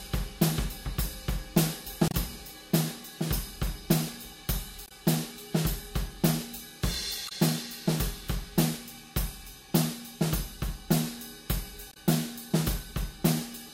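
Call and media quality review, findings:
Brief disruptions around 60 ms at 2.08–2.15, 4.86–4.92, 7.26–7.32, 11.91–11.97 s. Damaged data in a compressed stream: decoder misreads corrupt frames, loses sync, resyncs at the next header.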